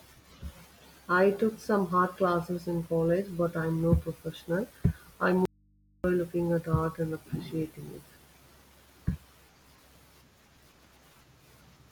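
At 5.45 s, after "I'm no professional I", the speech cuts out for 0.59 s and returns at "looking at art and". This audio dropout to a faint residue leaves only hum about 35 dB down, likely from a live input path. Its abrupt edges distinguish it from a pause or fade.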